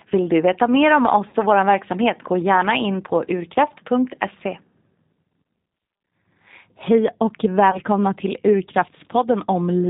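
Throughout, the speech carries G.729 codec damage that is plainly audible: nothing above 4 kHz, and a rough, slightly synthetic texture, consistent with an 8 kbit/s model of vocal tract filter, pitch predictor and sparse pulses rebuilding each 10 ms frame.

From 1.29 to 1.36 s, between "du veta mer om" and "och vår verksamhet gå", VoIP packet loss concealed by the speech codec covers about 40 ms of missing audio. The decoder stretches its last pitch and filter state into a fading sound, which fits two lost packets, and the speech stays weakened briefly afterwards as frames rebuild.

A second concealment runs from 7.71 to 7.80 s, bridging about 20 ms of missing audio, which points to a single lost packet.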